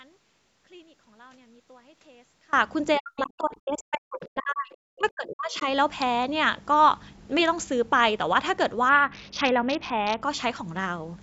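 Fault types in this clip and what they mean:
Audio dropout to a faint residue: The wanted signal was likely lost upstream while the path after the break stayed open, so from the very start until 2.53 s only a faint trace remains, roughly 30 dB below normal level. The sound then comes back abruptly at 2.53 s, with none of the gradual rise of a fade-in or the natural edge of a pause, which marks it as a break in the chain.
Speech suppressed in double talk: Between 2.98 and 5.68 s the speech dips, for about two seconds in total, at its deepest falling roughly 40 dB. The likely cause is an echo canceller that could not tell this talker apart from loudspeaker echo while the far side was also speaking, and so attenuated both together instead of removing only the echo.
Bluetooth SBC bit pool drop: From 8.89 to 10.22 s the encoder had far fewer bits per frame, as if a congested wireless link forced it down from a bit pool of 28 to 6, around 60 kbps. 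The upper sub-bands lose most or all of their allocation and the rest are coarsely quantised, so the treble goes dull and a gritty noise rides on the speech, already capped at 8 kHz by the call processing, until it recovers.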